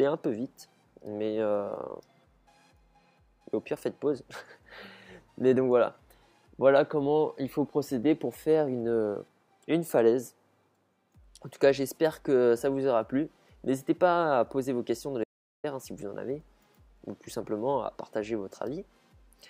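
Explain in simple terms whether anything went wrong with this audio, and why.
At 15.24 s the sound cuts off abruptly and comes back at 15.64 s, leaving a gap of about 0.4 s of complete silence, with no background hiss or room noise in it. This is an audio dropout to silence. The likely cause is that the input signal was briefly lost, for example through a loose connection, a failed link or an accidental mute, while recording carried on writing silence. Whatever sounded during that gap is missing.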